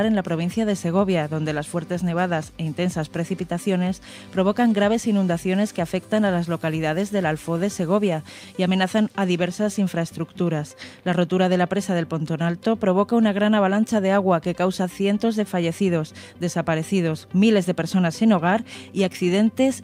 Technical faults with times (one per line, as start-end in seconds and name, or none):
none